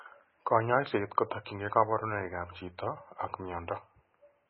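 Across the whole clip the speech sounds watery and swirly, with a metallic chirping on s sounds and blurred consonant onsets, and nothing is audible above about 5.6 kHz. This is likely MP3 compression at a very low bitrate, which fits around 16 kbps. Starved of bits, the encoder cut the treble at a fixed point and dropped weaker frequency components, letting them flicker in and out from frame to frame, which produces the heavy, warbling damage heard throughout.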